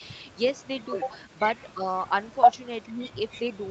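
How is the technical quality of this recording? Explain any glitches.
One glitch stands out near the end of this speech recording. Speech suppressed in double talk at 2.88 to 3.13 s: the voice drops by up to about 10 dB for a total of about a fifth of a second. The likely cause is the echo canceller mistaking the talker for loudspeaker echo while both sides spoke, and turning the talker down with the echo. Throughout the clip, nothing is heard above 8 kHz, which fits a wideband call codec such as Opus.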